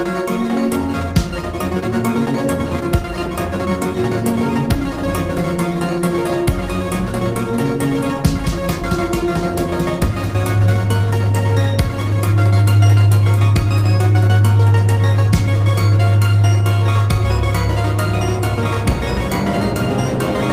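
Nothing in the audio stood out as a technical problem on listening.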